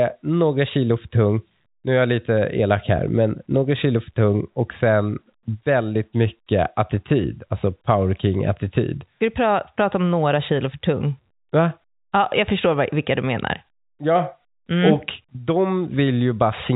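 Nothing goes wrong anywhere in the recording; the speech simply carries the usual narrow telephone-band character of G.711 A-law coding, with nothing reaching above about 3.8 kHz.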